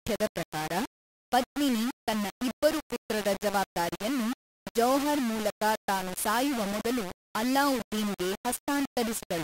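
Speech runs through the whole clip with grainy, signal-following distortion: quiet sounds turn rough and gritty, and the quiet decays and gaps sputter between steps or drop to silence. This is low bit depth without dither, likely 4 bits, rounded, with quantisation noise roughly 10 dB below the signal.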